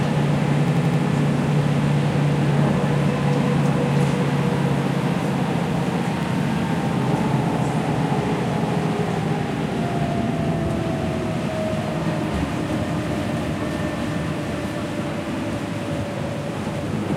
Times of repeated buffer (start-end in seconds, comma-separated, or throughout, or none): 0.68-1.02, 6.23-6.31, 15.36-15.45